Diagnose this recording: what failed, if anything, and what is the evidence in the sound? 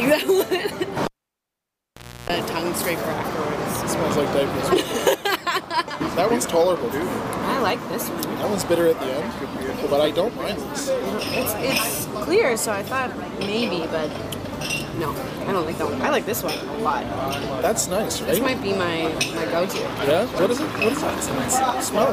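The failure is in the analogue wiring: a cable pulled and plugged in while the signal was live. At 1.05 s a pop cuts the sound to near silence for about 1.2 s. As the plug goes back in, a 310 ms burst of 60 Hz mains buzz appears while only the tip makes contact, then a second pop at 2.30 s brings the audio back. A digital dropout or buffer gap would leave clean silence, with no contact pops and no hum on either side.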